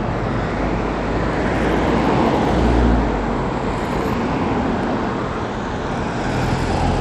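Throughout, the sound was likely squeezed through Bluetooth SBC compression at a bitrate pointing to around 96 kbps, starving the upper sub-bands: treble flickers and gritty, aliased noise rides on everything. At 1.56, 4.01 and 4.83 s, dropped samples likely removed a fraction of a millisecond each, so the waveform jumps abruptly and each gap is a single sharp click.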